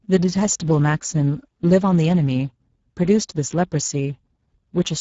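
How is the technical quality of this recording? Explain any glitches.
The technical quality is poor: Speex codec damage is plainly audible throughout the speech, which sounds noisy and hoarse, with nothing above 7.7 kHz. The CELP coder has too few bits to model the excitation faithfully, which fits a bitrate around 10 kbps.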